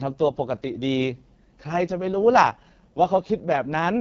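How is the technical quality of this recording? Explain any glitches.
The technical quality is poor. Throughout, the speech carries heavy AMR wideband (HD Voice) codec damage, consistent with its lowest 6.6 kbit/s rate. It sounds rough and raspy, with nothing above 7.4 kHz.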